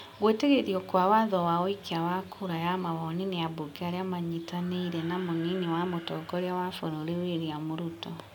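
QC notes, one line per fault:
No technical faults are audible in the signal at any point.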